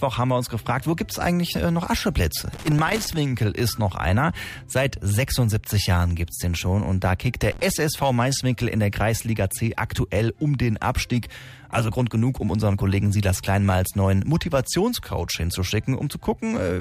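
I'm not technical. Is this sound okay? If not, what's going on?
No, there's loose connector crackle: a worn or dirty plug contact flickering on and off, giving scratchy bursts from 2.53 to 3.16 s and 7.52 to 7.70 s.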